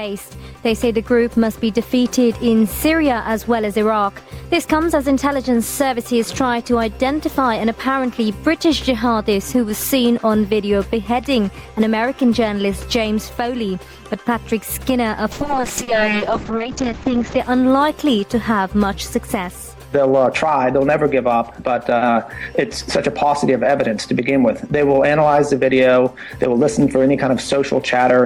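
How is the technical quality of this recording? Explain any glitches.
There's one glitch, a call bitrate drop from 15.33 to 17.45 s. The call's bandwidth estimate fell, so the encoder coded far more coarsely, which points to roughly 48 down to 6 kbps, and cut the top end from 20 kHz to 8 kHz. For about two seconds the audio turns rough and muffled before clearing.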